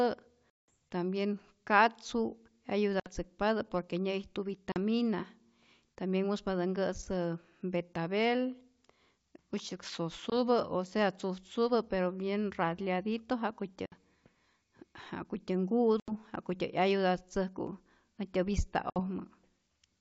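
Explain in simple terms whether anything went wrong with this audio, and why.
Short dropouts from packet loss on an ADPCM call occur at 0.53 s, 3.0 s, 4.72 s, 10.3 s, 13.86 s, 16.0 s and 18.9 s. Pieces of the signal never arrived, leaving sharp-edged silent gaps, the longest about 180 ms at the start. Afterwards the decoder's level tracking briefly disagrees with the sender's, so the speech jumps back with a click or slight roughness before settling.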